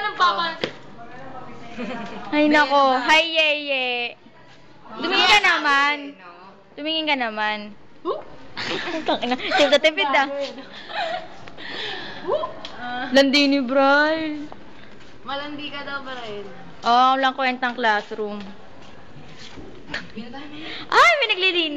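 No faults can be heard.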